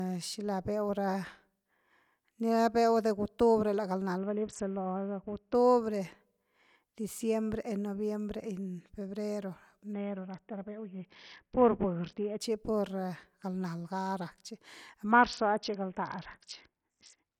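Speech that three times turns dull and gritty, the treble falling away under a coarse, grainy noise: from 4.18 to 5.54 s, from 9.93 to 12.40 s ending just before "pur galnal", and from 15.11 s, right after "rak chi", to the end. This is a Bluetooth SBC bit pool drop. The link congested and the encoder cut its bit budget, which fits the bit pool falling from 31 to about 6, near 55 kbps. The upper sub-bands were starved and the rest coarsely quantised.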